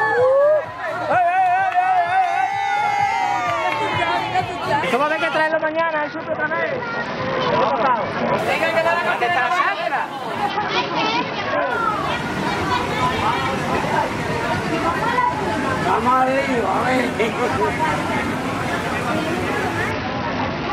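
Bluetooth SBC bit pool drops occur at 5.48–8.39 s, 10.50–11.71 s and from 19.91 s to the end. Each time, the treble dulls and gritty noise rises, pointing to the bit pool falling from 31 to about 7 (near 61 kbps), starving upper sub-bands and coarsening quantisation.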